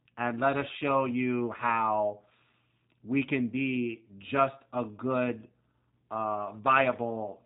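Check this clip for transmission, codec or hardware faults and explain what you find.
There's one fault, and it runs through the whole clip: the speech has clearly been through a G.729 codec. Nothing reaches above about 3.8 kHz, so it sounds narrowband and boxy. G.729 rebuilds the speech from a vocal tract filter, a pitch estimate and a handful of pulses per frame rather than sending the waveform itself, which leaves it plainly rough and slightly synthetic. That fits the 8 kbit/s G.729A variant.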